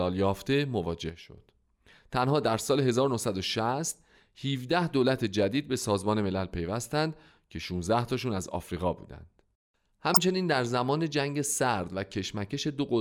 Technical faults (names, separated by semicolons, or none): one channel drops out; corrupt frame decoded